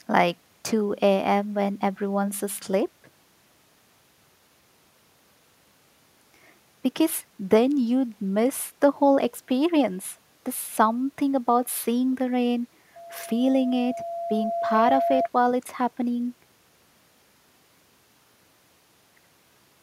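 From 12.96 s to 15.29 s a steady tone near 681 Hz swells over roughly two seconds until it is about as loud as the speech: loudspeaker feedback squeal. The microphone was picking up its own loudspeaker, and at that frequency the loop gain exceeded one.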